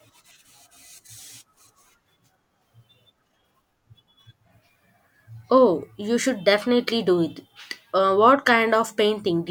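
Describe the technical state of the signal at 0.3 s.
At 0.3 s the speech signal is intact, with no audible fault at that moment.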